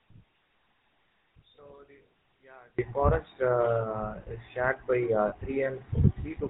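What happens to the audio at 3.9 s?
At 3.9 s you're hearing GSM full-rate codec damage that runs through the whole clip. Pulse-driven vocal-tract modelling at what sounds like 13 kbps cuts everything above 4 kHz and leaves the speech buzzy and gravelly.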